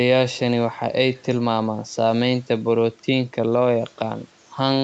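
No faults in the speech; the band stops at about 8 kHz and the low bass is trimmed, as expected from a call's microphone processing and an Opus call path whose sound fits a 64 kbps setting.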